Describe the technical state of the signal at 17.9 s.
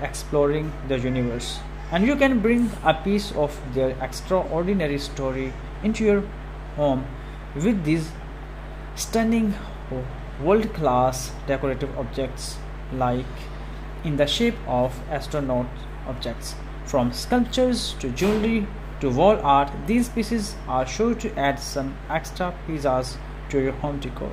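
Mains hum runs through 17.9 s and the whole clip: power-line coupling adds a steady 50 Hz tone with low harmonics, roughly 10 dB below the signal.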